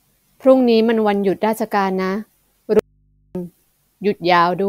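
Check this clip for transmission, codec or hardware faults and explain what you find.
One fault turns up. From 2.79 to 3.35 s the speech cuts off abruptly for about 0.56 s, leaving only a low mains hum far below the speech level: an audio dropout to a faint residue, likely the signal feed breaking while the downstream input stayed live.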